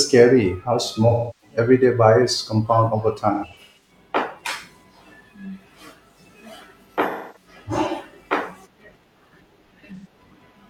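AAC frame loss with concealment occurs at 1.08 to 1.57 s, 3.34 to 3.91 s, 7.09 to 7.48 s and 9.95 to 10.06 s. Coded frames went missing, and the decoder patched each gap by re-synthesising the last good spectrum, which blurs the speech into a smeared, phasey wash. The first gap totals about 341 ms, the second the same but scattered in runs of up to around 150 ms, the third 256 ms and the last a brief 85 ms.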